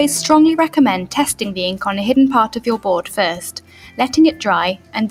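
A noise suppressor applied to music or sounds runs through the whole clip, treating held tones, ambience and decays as noise. Its gain swings by around 10 dB, so attacks pass while sustained parts sink, leaving the sound pumping and thinned. Sound cut by the noise suppressor is clearest from 3.56 to 3.99 s and again from 4.76 to 4.94 s, where the level drops by about 11 dB. The suppressor misjudged these steady or fading stretches as noise, lowering and shortening them.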